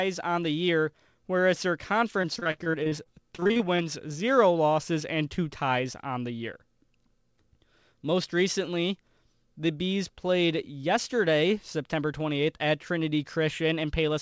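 Repeated packet loss (robotic sound) runs from 2.22 to 3.81 s, between "the year whereas their" and "zero losses and two". Packets kept arriving late or not at all, and each hole, the longest 42 ms, was patched by extending the last sound, covering 375 ms in all, about a quarter of the stretch. The result is choppy speech with fragments missing. Throughout, the call path's band limit leaves nothing above 8 kHz, which fits a wideband codec such as G.722.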